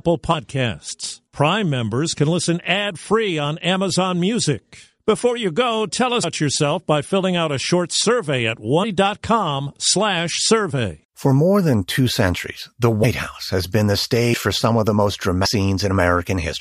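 Brief smeared blips, each with the speech lurching forward, occur at 6.23–6.25 s after "you go tell", 8.83–8.85 s after "a short survey at", 13.03 s, and 15.44–15.46 s after "for some of". These are compressed frames skipped. Roughly a tenth to a third of a second of audio is never played, which fits runs of whole 23.2 ms frames being lost. Overlap between neighbouring frames softens each join into a smear rather than a click.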